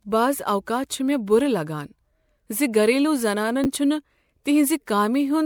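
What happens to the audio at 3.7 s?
Just after "ز گھریلو", from 3.64 to 3.66 s, there are chunks out of order. A 10 ms slice of audio plays one chunk late, after the slice that should follow it. Nothing is missing, but the swapped order creates hard joins at the boundaries. The result is a brief jumbled flicker, over almost as soon as it starts.

Underneath this moment, and across the whole clip, there is generation loss. The sound is swirly, smeared and hollow, with softened attacks. The content stops at about 20.7 kHz, which fits MP3 at around 128 kbit/s. The smearing goes beyond what that rate alone would produce. The likely cause is repeated decoding and re-encoding, roughly four passes, each quantising on a shifted frame grid so the damage builds up.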